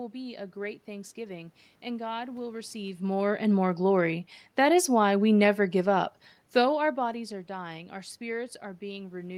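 A speech recording with no technical faults.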